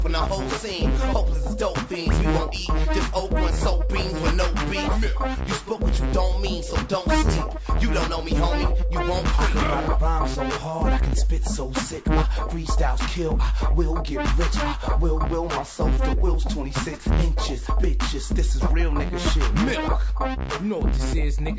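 Nothing in the audio calls for comment, as there are no technical faults to point to anywhere along the way.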